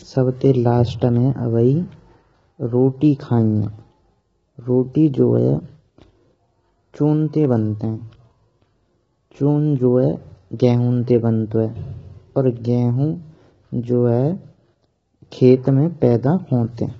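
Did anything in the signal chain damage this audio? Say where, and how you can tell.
Yes, at the codec stage, throughout the clip. The speech sounds rough and grainy, with a hiss-like fuzz filling the gaps between voice harmonics, and nothing survives above 7.7 kHz. That points to low-delay AAC compression, likely AAC-ELD at a low rate; the heavy damage fits a bitrate around 16 kbps. Its short frames blur pitch harmonics and starve them of bits. A spectrogram shows smeared harmonic lines over a noisy floor, sharply cut off at 7.7 kHz.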